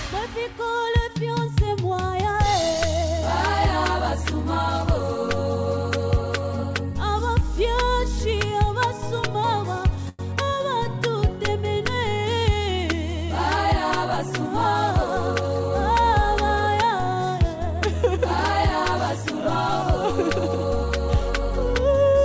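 Around 10.09 to 10.21 s there's a short stall from a late packet: the jitter buffer ran dry, so the sound holds for about 99 ms with a slight buzz or dip, then carries on. A shorter 22 ms stretch follows at 10.45 to 10.49 s, all over a G.722 path topping out at 8 kHz.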